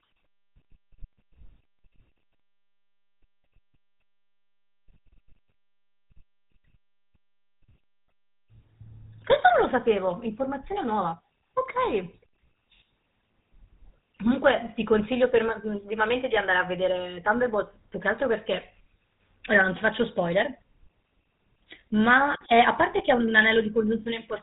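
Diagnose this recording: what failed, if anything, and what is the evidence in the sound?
GSM full-rate codec damage runs through the whole speech clip, a codec-stage fault. The speech has a plainly audible buzzy, gravelly roughness, and nothing above 3.8 kHz survives, which fits a 13 kbps GSM full-rate link that rebuilds speech from a vocal-tract model excited by sparse pulses.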